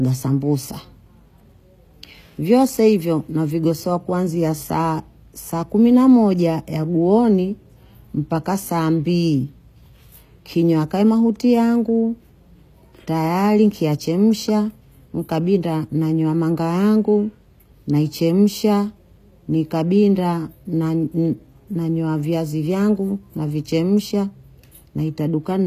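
Throughout the speech, s sounds are gritty and lispy and nothing reaches above 14.9 kHz, likely from HE-AAC compression near 24 kbps. Unlike a plain low-pass dulling, the treble stays bright but is copied from lower bands, so it sounds metallic rather than missing.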